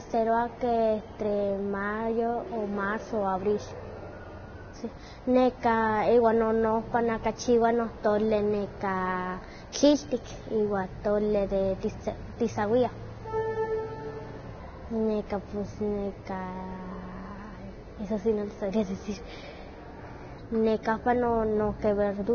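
Hissy, grainy speech runs the whole clip, with nothing above about 6.5 kHz, a dull, band-limited top, and consonant attacks smeared into a rough wash instead of landing cleanly. That points to heavy Vorbis compression, likely at a very low setting that fits a bitrate around 18 kbps. At that rate the encoder chops off the upper band and codes the remaining treble so coarsely that fine detail is swapped for noise of similar energy, producing the grit and blurred onsets.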